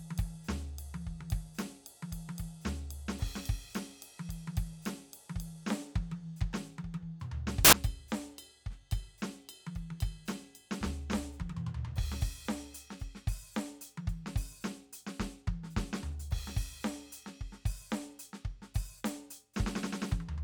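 A music clip with one brief fault. From 7.65 to 7.73 s, about 80 ms, the music gives way to a burst of loud, harsh broadband noise. This is samples built from the wrong bytes. For that stretch, each sample's bytes are put together wrongly, either shifted by a byte, swapped in order, or misaligned. The rapidly changing low bits then become the large part of each value. The result is a loud, harsh blast.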